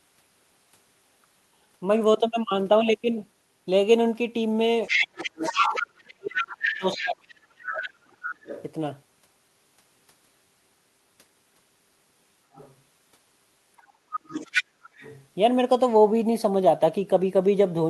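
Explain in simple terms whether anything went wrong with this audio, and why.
Two problems are audible. First, the other side's voice leaking through: a second voice is heard at 4.87–5.87 s (as loud as the talker), 6.29–7.29, 8.27–8.63, faintly at 12.53–12.75, and 13.77–15.26 s. The likely cause is an echo canceller that failed to remove the loudspeaker sound.

Second, speech suppressed in double talk: the talker's voice drops sharply at 5.1–5.4 s and through 5.9–8.27 s, likely because the canceller turned everything down while both sides spoke.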